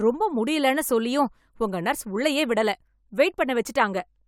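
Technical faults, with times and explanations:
No technical faults found.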